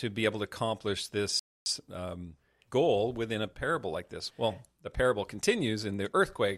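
At 1.39 s the speech halts in a rebuffering stall: playback exhausted its downloaded audio and waited about 0.27 s for more. Silence fills 1.39 to 1.66 s, then speech resumes exactly where it stopped. Waveform and spectrogram show a clean, empty gap.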